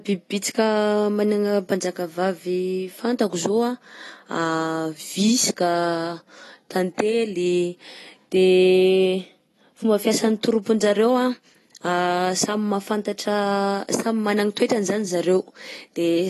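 AAC compression runs through the whole speech clip, from start to finish. Nothing is heard above about 12.1 kHz, so the top of the spectrum is simply missing and the speech sounds dull. The damage is plainly audible: sibilants turn fizzy and smeared, and sustained sounds take on a warble. The likely cause is AAC-LC encoding at a low bitrate, consistent with about 32 kbps, where too few bits force the encoder to discard high frequencies and quantise the remaining bands coarsely.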